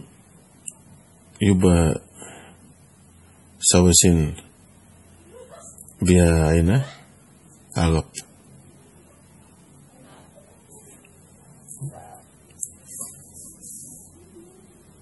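Throughout the speech, the audio was likely squeezed through MP3 compression at a very low bitrate, which fits something around 32 kbps. With so few bits, the encoder discarded everything above 11.5 kHz and dropped weaker frequency lines that flicker in and out between frames. The damage is heavy: the speech has a watery, swirling texture, s sounds turn metallic and chirpy, and consonant onsets come across smeared rather than crisp.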